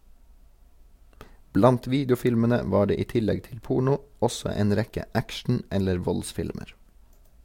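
No faults can be heard anywhere in this speech recording. There is nothing to place on a timeline, since the sound runs on without any break or disturbance.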